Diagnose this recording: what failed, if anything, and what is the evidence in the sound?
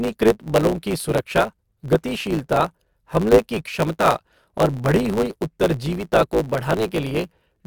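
A block size mismatch (truncated) at the buffer stage runs throughout: a 109 Hz buzz at the block rate, with speech hurried about 1.09 times at normal pitch, as block tails are dropped.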